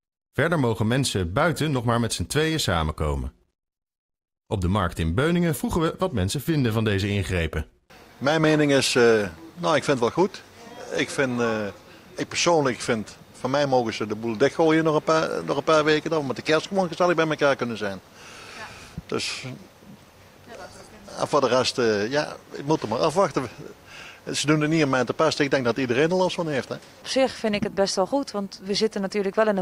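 No technical faults can be heard anywhere in this audio. There is nothing here that calls for a timestamp or a closer listen.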